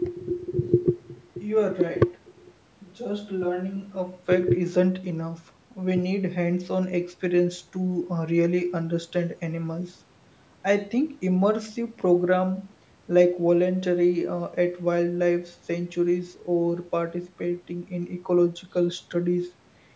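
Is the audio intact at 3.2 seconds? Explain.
Yes, the speech at 3.2 seconds is intact, with no dropout, click or distortion there, only the ordinary band limit of call microphone processing, which leaves nothing above 8 kHz.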